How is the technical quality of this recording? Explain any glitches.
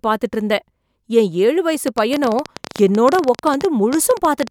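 The main problem is a train of clicks that takes over the back half of this speech clip. From 1.88 s to 4.48 s there's a run of sharp, near-identical pulses, about 13.5 a second but unevenly spaced, some forty of them in all. They sit well above the speech, around 10 dB louder, so they read as a ragged ticking laid over everything, gaps included. The likely cause is interference from nearby equipment or a faulty connection or power supply.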